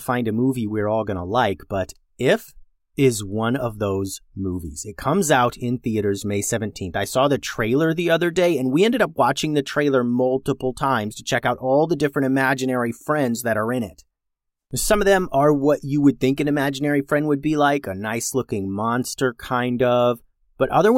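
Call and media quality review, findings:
Listening through the speech recording, nothing stood out that would warrant a finding.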